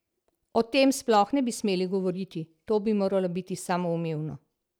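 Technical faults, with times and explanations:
No technical faults can be heard anywhere in this speech recording; the signal stays continuous and steady throughout.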